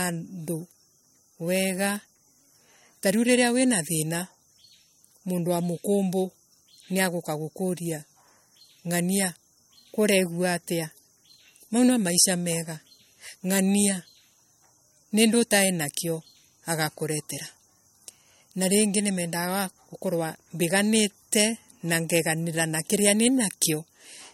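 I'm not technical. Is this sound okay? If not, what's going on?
No. MP3 compression damage runs through the whole recording, likely from saving it as a low-quality MP3. To shrink the file, the encoder drops everything above about 16.6 kHz and discards quieter detail, so the speech sounds noticeably watery and swirly throughout.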